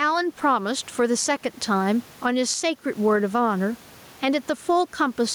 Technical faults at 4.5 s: gain pumping

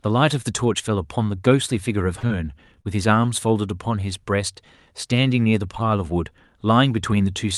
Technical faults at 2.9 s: repeated packet loss (robotic sound)

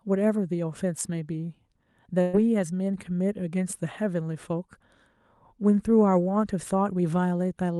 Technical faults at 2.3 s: burst of packet loss; lost packet rebuilt from error correction

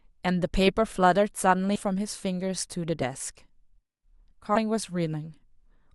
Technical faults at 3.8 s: none

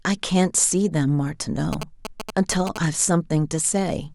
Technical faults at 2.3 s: GSM signalling bursts

